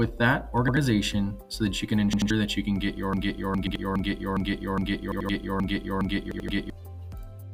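The audio stutters with repeated buffers at 0.68, 2.13, 3.67, 5.12 and 6.32 s. At each point an 85 ms piece, which fits a 4096-sample buffer, sounds two or three times with hard joins, and roughly 100 to 150 ms of sound goes missing. From 3.13 to 6.7 s a broken-record loop repeats one 0.41 s fragment nine times back to back, likely from a stalled player or stream. The loop is set apart by its longer fragment and seconds of sustained repetition, against the brief stutters, three of which also fall inside it.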